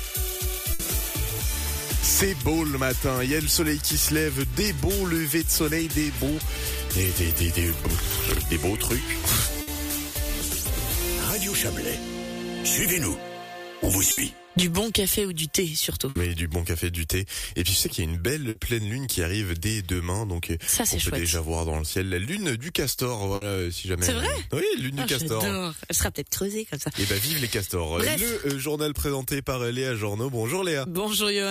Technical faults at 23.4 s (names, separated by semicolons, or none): burst of packet loss